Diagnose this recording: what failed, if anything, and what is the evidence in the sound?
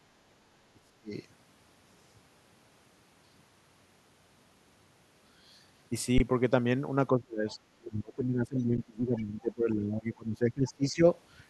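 Speech suppressed in double talk, at the call-processing stage, from 0.73 to 1.12 s, 7.14 to 7.63 s and 7.79 to 11.06 s. The level sinks by about 35 dB, and by about 25 dB in the long stretch. The likely cause is the echo canceller ducking both voices while both sides spoke.

Underrun with held sample, at the driver or buffer stage, at 6.18 to 6.20 s (20 ms) and at 8.77 s (10 ms). The output buffer emptied and the converter froze on its last value, so the waveform goes flat and the sound stops. Playback resumes where it stopped with no audio lost, so each gap ends more softly than a dropout with discarded data.

Other side's voice leaking through, at the call-processing stage, in brief scraps at 7.49 to 7.55 s, 8.59 to 8.63 s and 9.17 to 9.21 s. These scraps sit about 30 to 35 dB below the main talker. The likely cause is loudspeaker echo the canceller failed to remove. The scraps fall inside the suppressed stretches, which ties them to echo rather than to wiring crosstalk.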